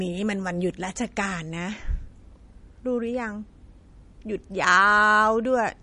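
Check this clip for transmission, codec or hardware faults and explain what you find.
One codec fault runs through the whole speech clip. The damage throughout is likely MP3 compression. Nothing is present above 10.6 kHz, and weak spectral lines drop in and out between frames, giving a watery, swirly texture, which fits a low bitrate around 40 kbps.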